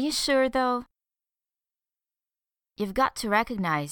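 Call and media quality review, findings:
No technical faults found in the signal path for this speech recording.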